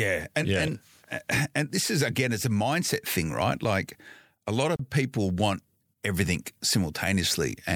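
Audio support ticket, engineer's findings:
Gap at a join of encoded pieces, 4.76 to 4.79 s, right after "a lot" and before "people want everything". About 33 ms dropout in continuous speech. Likely separately encoded chunks of about 6 s concatenated untrimmed, leaving encoder delay and last-frame padding in.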